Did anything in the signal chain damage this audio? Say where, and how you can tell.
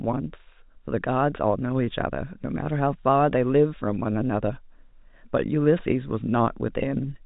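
No, nothing in the chain damaged this speech; it's simply been through G.711 telephone coding, which is why nothing comes through above about 3.8 kHz, consistent with the standard 64 kbps A-law path.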